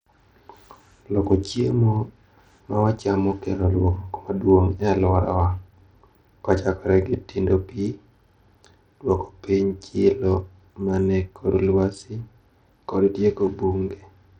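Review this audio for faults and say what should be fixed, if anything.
The audio appears to have passed through a starved Bluetooth link, likely a case of Bluetooth SBC compression with a small bit pool, which fits a bitrate near 80 kbps. The basic codec splits the signal into a few wide bands and assigns bits crudely, so the upper bands get almost nothing. Across the whole speech clip, the treble thins out and flickers, and a gritty, aliased haze clings to the speech. To prevent this, record over a wired connection or a higher-quality Bluetooth codec and bitrate setting.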